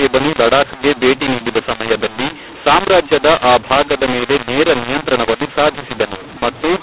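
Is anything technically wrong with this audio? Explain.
Yes. A mu-law and A-law mix-up runs throughout. Mu-law telephone samples decoded as A-law scramble the levels, making the speech harsh and distorted and filling the pauses with noise.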